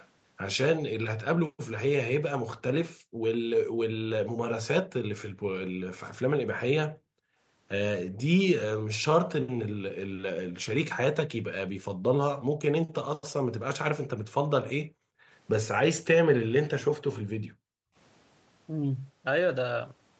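Speech clip. From 0.00 to 0.08 s a faint delayed copy of the voice, roughly 25 dB down and trailing by 381 ms, is likely an echo leak from a far-end loudspeaker. The background is gated by the echo canceller at 2.96–3.23, 6.89–7.38, 14.84–15.29 and 17.21–17.95 s: the room sound drops by about 40 dB while the canceller suppresses the microphone, then returns. The 8 kHz upper band limit comes from the Opus call path.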